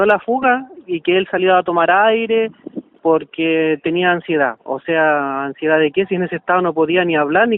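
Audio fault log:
0.42–0.45 s, corrupt frame decoded: a fairly loud chirpy blip, a couple of damaged frames' worth, where flipped bits gave the decoder wrong gains and codes, so energy landed at the wrong frequencies.
4.58 s, corrupt frame decoded: same thing, but only a faint tick, well down in level.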